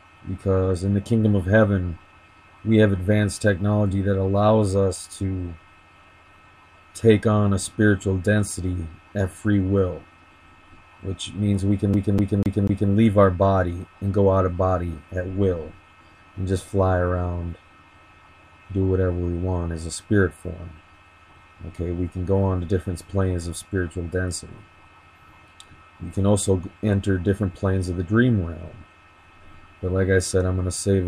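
Audio with a CD stuck on one turn from 11.94 to 12.92 s: a 246 ms slice repeats four times, each jump back marked by a brief mute. The waveform shows identical blocks separated by thin gaps, and the spectrogram shows matching vertical stripes at even spacing.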